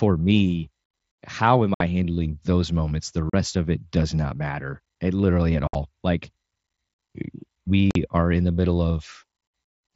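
Speech over a wideband mSBC headset link, band-limited near 8 kHz with faint graininess, drops out abruptly four times, at 1.74–1.81 s, 3.30–3.34 s, 5.67–5.75 s (a broken cluster, longest gap 60 ms) and 7.91–7.96 s. This is unconcealed Bluetooth headset packet loss: lost voice packets were replaced with silence or an idle pattern rather than patched over.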